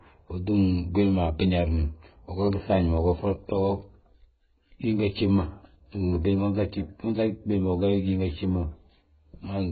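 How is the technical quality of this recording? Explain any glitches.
Technical quality is poor, with heavy codec damage for the whole clip. AAC compression, throughout: the speech has nothing above 4.6 kHz, so it sounds dull and muffled. Sibilants and sustained sounds carry a warbling, fizzy texture. The likely cause is AAC-LC coding at a very low bitrate, around 12 kbps. At that rate the encoder lowers its cut-off and quantises each frame's frequency lines coarsely, leaving spectral holes and smearing detail.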